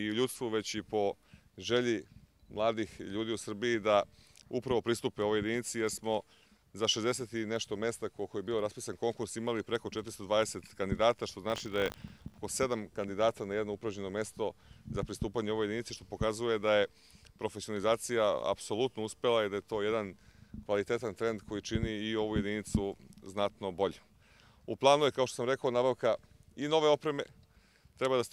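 From 11.48 to 12.39 s there is buffer tearing: a hard, robotic buzz at 50 Hz, present only while sound is playing. The writer and the playback hardware have drifted out of step on the ring buffer, so their positions cross once per period, which points to a buffer cycling every 20 ms. In each period a small slice, around 2 percent, is stale audio from roughly 70 ms earlier, spliced in with abrupt joins at both edges that produce the rattle.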